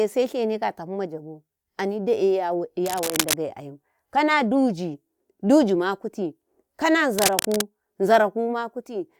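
Cable scratch noise at 2.85–3.34 s and 7.18–7.61 s: dense, uneven rustling bursts only slightly below the speech, likely from a worn cable or connector being moved.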